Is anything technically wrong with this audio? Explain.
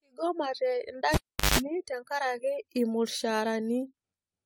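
Yes, there are two faults: generation loss across the whole recording and a cable being pulled and plugged in early on.

Generation loss is present throughout. The speech has a swirly, smeared, hollow character, with consonant attacks blurred and content ending near 19.4 kHz. This is more damage than a single AAC-LC pass at 64 kbit/s would leave. The likely cause is repeated decoding and re-encoding, around four times. Each pass quantises the signal again on a shifted frame grid, so the coding noise and spectral holes build up.

A cable pulled and plugged in occurs from 1.14 s to 1.58 s. It opens with a pop, then drops to near silence for about 0.39 s while the connection is broken. While only the tip makes contact, there is about 0.17 s of 50 Hz mains buzz. A second pop follows as the connection seats and the sound returns.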